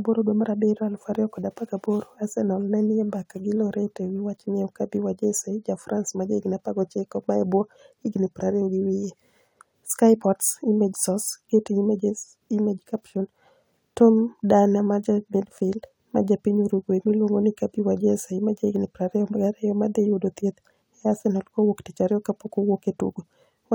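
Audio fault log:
No faults heard.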